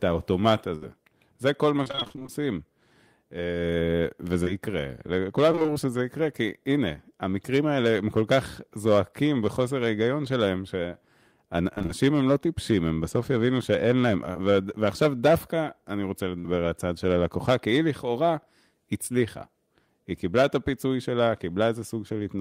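Right at 0.75 to 0.84 s there's a burst of packet loss: about 60 ms of speech never arrived, so the receiver stretches the last sound and fades it, then jumps ahead. From 1.84 to 2.42 s you get repeated packet loss with a robotic sound, twelve short gaps, none over 25 ms, each patched and chopped up again so nearly half the stretch is filler. At 4.44 s a short concealed packet loss fills about 20 ms and leaves a quick smear. The robotic chop comes back at 5.52 to 5.77 s and 11.74 to 11.91 s. Another brief 20 ms smear lands at 14.33 s, and a second burst loses roughly 60 ms at 16.39 to 16.47 s.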